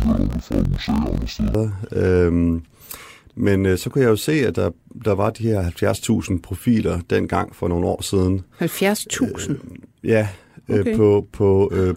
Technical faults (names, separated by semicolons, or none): interleaved audio read as planar